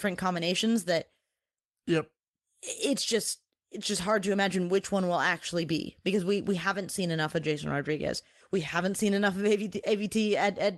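No faults heard in the speech: it has come over a call link whose codec caps the top end at about 12 kHz, which fits Opus at a modest bitrate, and that path is working as it should.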